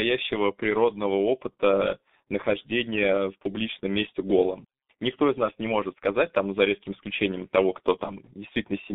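From start to end, the speech carries heavy G.723.1 codec damage. Nothing reaches above about 3.7 kHz or below 200 Hz. The coarse, slow-updating voice model makes it muffled and hoarse. Consonants blur together. This points to a rate near 6.3 kbit/s.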